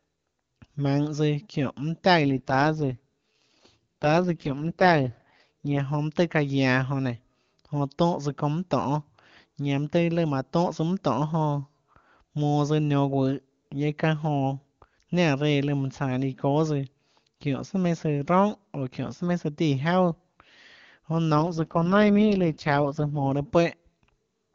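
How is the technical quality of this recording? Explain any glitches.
The speech has two AMR rate drops, heard over an HD Voice (AMR-WB) link. From 2.22 to 5.8 s and from 21.34 to 23.32 s, the voice turns rough and synthetic without losing band or dropping out. A weak radio link forced the codec down. The roughness fits a fall from 23.85 to 6.6 kbit/s.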